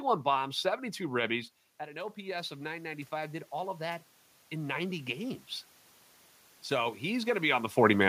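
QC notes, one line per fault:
1.77 to 5.49 s, automatic gain rising: the level drops by about 13 dB at the microphone just before this, as the talker moves around one and a half seconds in. The gain control then slowly lifts its gain by about 11 dB over nearly four seconds. Voice and room noise swell together, which sets it apart from a talker coming closer, where only the voice grows and the background stays steady.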